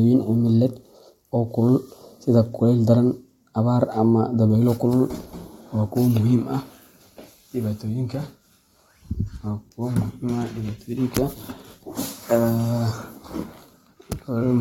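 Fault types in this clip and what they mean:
Nothing in this speech recording calls for a fault label, since nothing in it gives any sign of a technical problem.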